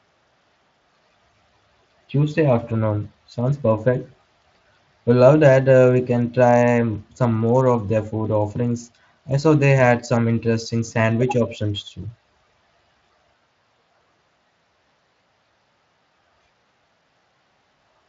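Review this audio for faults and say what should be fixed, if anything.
Nothing here needs fixing; the speech comes through the Speex link as expected, with no faults to report.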